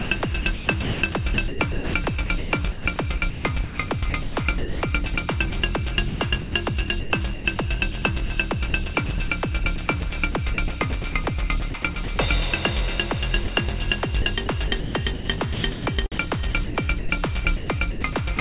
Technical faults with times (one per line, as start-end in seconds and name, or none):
0.00-12.18 sound chopped by the voice detector
13.44-13.48 sound dropped by the voice detector
14.22-18.39 sound chopped by the voice detector